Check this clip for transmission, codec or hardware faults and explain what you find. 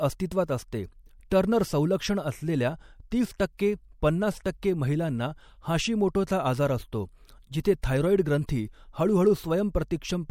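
The speech carries a codec fault, pre-echo, heard seven times: at 1.3 s (just before "टर्नर संलक्षण असलेल्या तीस"), 3.38 s (just after that phrase), 3.57, 4.44, 7.64 (just after "महिलांना हाशिमोटोचा आजार असतो"), 7.82 and 8.47 s. Each is a hiss of 12 to 18 ms, about 14 to 26 dB above the background, leading into a sharp attack. The attacks fall late in blocks of about 26 ms, and the codec never switches to shorter blocks, so noise meant for the loud onset spreads back over the quiet before it. Unlike a click or post-echo, the smear comes before the attack, not after it.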